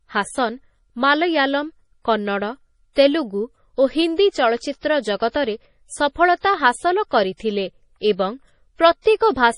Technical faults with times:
0.00-9.58 MP3 compression

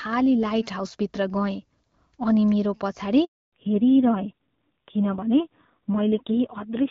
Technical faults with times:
3.25-3.52 handover gap
3.52-6.90 fallback to narrowband

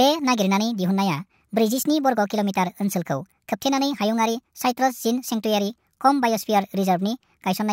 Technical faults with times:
0.00-7.72 wrong sample rate

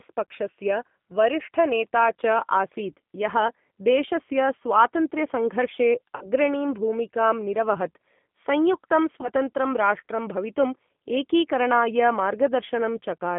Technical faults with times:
0.00-13.38 G.729 codec
6.16-6.28 VoIP packet loss concealed by the speech codec
9.21-9.28 VoIP packet loss concealed by the speech codec

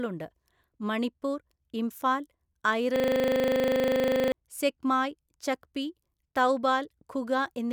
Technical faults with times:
2.96-4.32 system hang loop

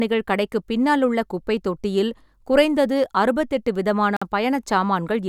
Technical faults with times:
4.17-4.22 Bluetooth stall

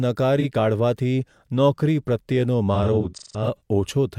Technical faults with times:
0.39-0.45 AAC frame loss with concealment
2.74-3.61 AAC frame loss with concealment

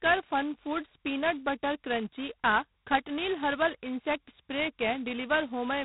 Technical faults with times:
0.00-5.84 G.726 ADPCM

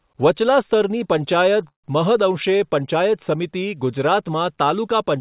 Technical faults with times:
1.68-1.85 call audio freeze

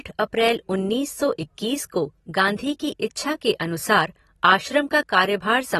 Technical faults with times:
0.00-5.79 AAC compression

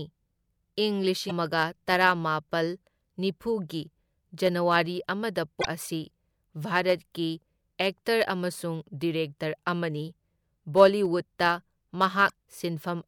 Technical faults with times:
1.28-1.31 broken MP3 bit reservoir
5.61-5.66 broken MP3 bit reservoir
12.28-12.30 broken MP3 bit reservoir

